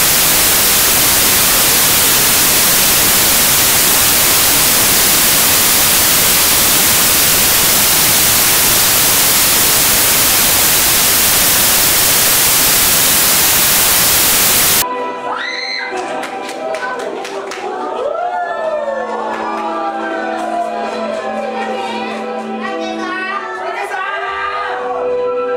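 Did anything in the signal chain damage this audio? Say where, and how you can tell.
Yes. From 0.00 to 14.82 s the sound is replaced by loud, harsh broadband noise, the signature of samples built from the wrong bytes at the sample-format conversion stage. The reader is assembling each sample's bytes wrongly, whether misaligned by one byte or with the byte order swapped, so the rapidly changing low bits land in the most significant position. A spectrogram shows flat broadband energy up to the top of the band, and the waveform is a dense, high-level block.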